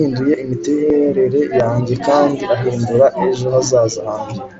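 No technical fault is audible in this speech recording, which has the bandwidth of a wideband Bluetooth headset link using the mSBC codec, with content ending near 7.7 kHz and the light graininess that codec normally adds to louder sounds.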